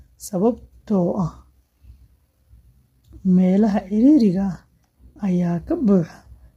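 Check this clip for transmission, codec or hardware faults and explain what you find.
One codec fault runs through the whole speech clip. Low-delay AAC compression, present throughout, is the likely cause. Its short frames resolve pitch harmonics poorly, and at a rate that fits about 24 kbps the damage is heavy: rough, grainy voicing, noise filling the gaps between harmonics, and a dulled, synthetic-sounding top band.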